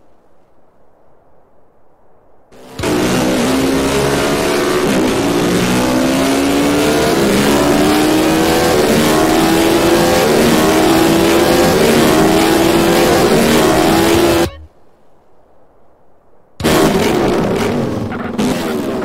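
Nothing technically wrong turns up anywhere in this audio, so there's no fault to time or trace back to a cause.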